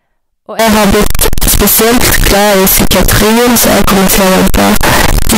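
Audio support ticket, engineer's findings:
From 0.59 s to the end at 5.37 s, harsh near-square blast at a near-fixed high level, noise as loud as speech; likely float read as integer, 32-bit float samples decoded as 32-bit int.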